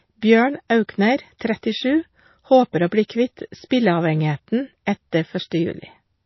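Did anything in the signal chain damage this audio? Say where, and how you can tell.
Yes. At the codec stage, the speech throughout is watery and swirling with nothing above 5.8 kHz. A hard wall, not a gentle roll-off, points to MP3 compression, likely near 24 kbps.

Also at the codec stage, pre-echo appears from 3.69 to 3.71 s: a short hiss arrives just before an attack. It is quantisation noise spread backwards across the transform block, unlike a click, which stands alone.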